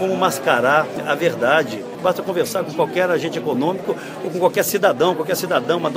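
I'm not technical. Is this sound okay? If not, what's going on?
Yes, nothing stood out as a problem when listening to it.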